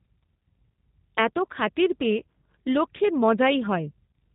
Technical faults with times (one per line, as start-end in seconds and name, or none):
0.00-4.35 G.729 codec